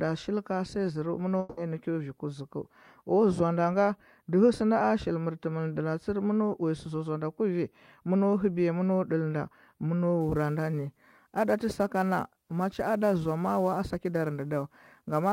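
Speech runs normally at first, but from 1.39 to 1.60 s the sound smears into a fading buzzy continuation of the last sound rather than going silent, and about 180 ms of the speech never comes back. When the audio resumes it has simply skipped ahead. That pattern, a concealment tail filling the gap while the real signal is missing, is most likely a long network dropout in which packets stopped arriving and the receiver extrapolated until fresh audio returned. From 10.21 s to the end, a fine hiss and graininess rides on the speech, thickest on loud and bright sounds such as sibilants and vanishing in the pauses. This is sample clock jitter: the converter's timing wanders by several microseconds, so each sample lands slightly off time. Fast-changing parts of the waveform turn that timing error into noise roughly 30 dB below the speech.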